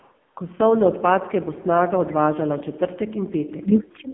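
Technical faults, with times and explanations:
throughout AMR narrowband mobile codec: the speech sounds heavily buzzy and synthetic, boxed into a 150 Hz to 3.4 kHz band with nothing above. Its vocal-tract model, driven by too few pulses per 5 ms, rebuilds the voice crudely, which fits AMR-NB's 5.9 kbps mode.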